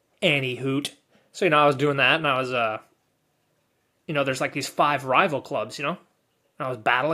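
No technical faults can be heard anywhere in this speech recording.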